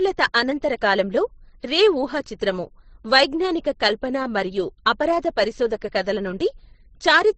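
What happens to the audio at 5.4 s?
At 5.4 s the speech is dull, with nothing above 8.4 kHz and the artefacts of two codecs heard together, as it is throughout the clip. The likely cause is transcoding between lossy codecs: a low-bitrate Opus-style encode then re-encoded to MP3, each layer adding its own artefacts.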